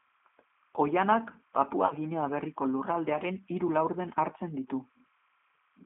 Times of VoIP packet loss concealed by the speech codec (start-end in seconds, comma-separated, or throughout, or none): 1.86-1.94